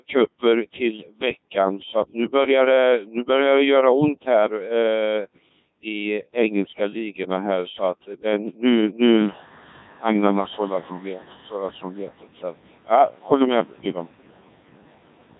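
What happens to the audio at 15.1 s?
The Codec 2 vocoder, running throughout, sends only pitch, voicing, energy and spectral shape, consistent with its 1.6 kbit/s mode. At 15.1 s the speech is resynthesised, robotic, buzzy and heavily mangled. Noise suppressor artifacts are also present throughout: bands judged to be steady noise are pulled down by about 17 dB frame by frame, so the room noise, louder since about 9 s, sinks and surges around the speech.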